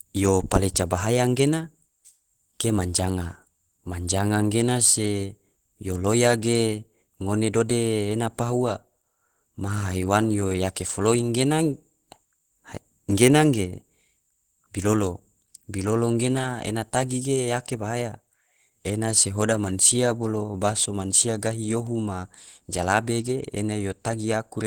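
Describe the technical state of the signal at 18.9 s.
At 18.9 s the speech sounds hoarse, grainy and muffled, with a rough texture, as it does throughout the clip. The cause is likely Opus compression in its hybrid speech mode, which fits a low bitrate around 16 kbps.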